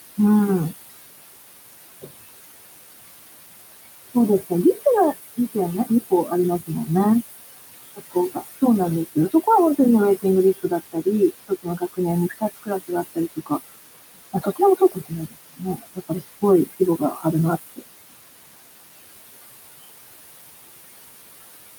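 Speech over room noise sitting about 12 dB below the voice shows noise suppressor artifacts throughout: the background is pulled down by about 18 dB between phrases and swells back under them. Speech cut by the noise suppressor occurs at 5.86–6.31 s, 7.96–8.61 s, 10.63–13.51 s and 14.33–17.25 s. There, quiet speech components misread as noise drop by about 14 to 21 dB and sound swallowed, most extensively in the last two spans.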